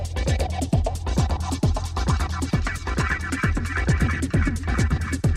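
No technical faults are audible.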